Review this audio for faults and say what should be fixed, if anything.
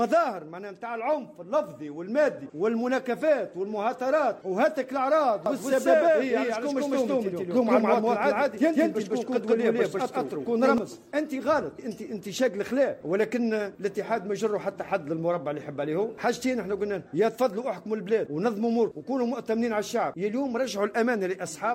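From 5.46 to 10.78 s the sound has a doubled audio track: a second full-band copy trails the original by around 150 ms at roughly the same level, and it starts and stops abruptly at those times. A single copy with no decay or room colouring separates it from an echo or reverb tail. The likely cause is the same signal reaching the mix twice through paths with different latency, or two misaligned copies left in an edit. To prevent it, route each source through a single path and check edits for overlapping duplicate regions.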